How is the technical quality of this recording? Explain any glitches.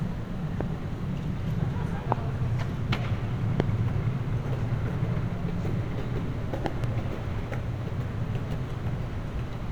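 The recording has one recurring fault: loud pops. Single pops land at 0.61, 2.12 and 3.60 s, each lasting about 20 ms, and a double pop spans 6.66 to 6.86 s. Each is a sharp transient peaking roughly 15 to 20 dB above the surrounding sound, which continues underneath. The likely cause is a sudden voltage step or pulse, such as a connector, switch, static discharge or driver glitch, that the downstream circuitry shapes into a brief thump.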